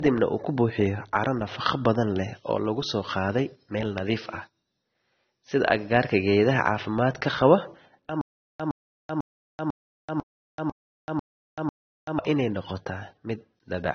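A speech recording. Nothing is present above about 6.3 kHz, so the sound is dull and muffled. The band edge and the smeared, watery detail point to low-bitrate audio saved at a high bitrate. The file is MP3, and the sound fits a source that was likely a low-rate AAC stream of around 24 kbit/s, re-encoded at something like 256 kbit/s. The second encode is clean, but it cannot restore the missing top end or repair the earlier artefacts. From 8.21 to 12.19 s there is a stutter with silent gaps. A 112 ms fragment plays, then about 385 ms of dead digital silence follows. This cycle repeats eight times, once every 497 ms. The pattern suggests a player or stream that likely stalled and replayed its last buffered piece at each retry. Whatever speech belonged in those four seconds is gone.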